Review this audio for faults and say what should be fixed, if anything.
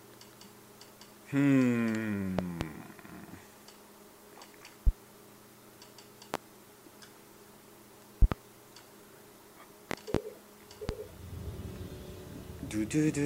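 A sudden voltage step, likely from a plug, switch or static discharge, is being added to the signal, causing loud pops roughly 20 dB above the sound. Each is a sharp thump, with doubled pops at 2.39–2.65, 8.22–8.36 and 9.91–10.18 s and single ones at 4.87–4.91, 6.34–6.38 and 10.89–10.93 s, while the sound continues underneath. Secure connectors, ground the equipment, and mute the signal path before switching anything.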